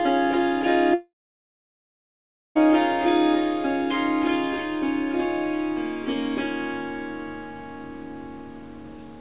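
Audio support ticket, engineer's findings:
Long network dropout, 0.94 to 2.57 s. Last bit of sound smeared into a short fading buzz, then about 1.45 s of dead air. Roughly 1.6 s never arrives; audio resumes further on. Likely packet loss, with jitter buffer concealment giving up. Band tops out at 4 kHz throughout, which fits a G.711 mu-law call path.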